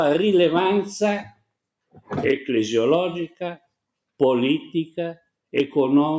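From 1.23 to 1.44 s and again from 1.92 to 2.11 s, the noise suppressor mistakes the sound for noise and pulls it down by about 20 dB. Unlike a dropout, the sound never vanishes; it just sinks briefly, within audio already band-limited to 8 kHz by the call microphone processing.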